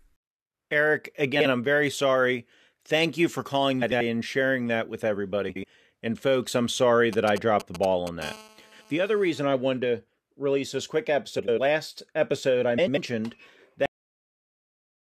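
Frames out of order at 1.35 to 1.45 s, 3.81 to 4.01 s and 5.49 to 5.64 s: two adjacent blocks of speech, about 46, 93 and 70 ms each, play swapped, giving a garbled flutter with no time lost.

GSM signalling bursts from 7.13 to 8.24 s: a nearby 2G phone's short radio bursts are rectified by the audio circuit, heard as a galloping dit-dit-dit of 217 Hz buzzes, roughly 10 dB below the speech.

GSM phone buzz from 8.24 to 9.39 s: the phone's call transmission, in bursts 217 times a second, rectified, gives a steady raspy buzz rich in harmonics at about 23 dB below the speech.

Frames out of order recur at 8.62 to 8.82 s, within the buzz, then at 11.38 to 11.59 s and 12.78 to 12.98 s, each swapping two blocks of about 93 ms.

Cut-off end at 13.86 s: the final buffers were never played, so the speech stops mid-sound and drops straight to silence with no decay.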